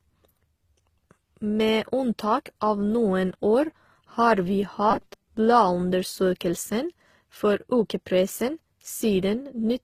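Throughout, the speech was likely transcoded between lossy codecs, Opus then HE-AAC, so their artefacts stack and nothing survives above 14.9 kHz. From 4.91 to 5.28 s, just after "har vi", repeated short buffers, with about half the audio recycled, produce robotic sound: a rigid metallic 200 Hz buzz, which fits 5 ms repeats.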